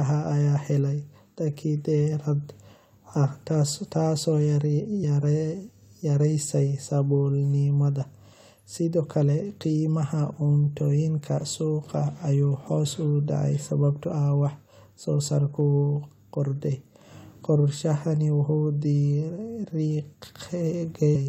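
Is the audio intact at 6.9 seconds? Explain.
Yes, the speech at 6.9 seconds plays through cleanly, with no dropout, click or other fault at that moment.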